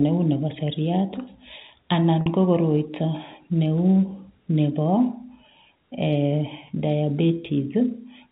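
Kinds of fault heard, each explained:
Packet loss with pitch repetition: About 50 ms of speech went missing from 2.21 to 2.26 s. The receiver bridged the gap by repeating the last pitch cycle. This is heard as a brief, slightly held buzz just before "ko koroito" resumes.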